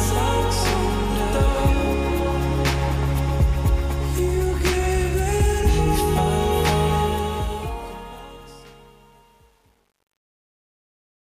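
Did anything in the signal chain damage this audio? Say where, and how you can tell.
Yes, truncation distortion on a fade in an undithered sample-format or gain stage: the fade-out from 7.0 s turns gritty, worst from 8.07 s to the end. That fits roughly 9-bit stepping, not codec swirl.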